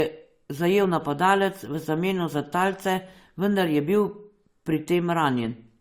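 Speech runs through the whole clip with a layered coding texture. It sounds like transcoding between lossy codecs, most likely an AAC-LC encode at around 64 kbit/s re-encoded to Opus at around 48 kbit/s. The second codec spends bits re-describing the first one's smearing and adds its own. On a spectrogram the band above 20.1 kHz is empty throughout, and consonant onsets show blurred, speckled high-frequency energy from both codecs' artefacts.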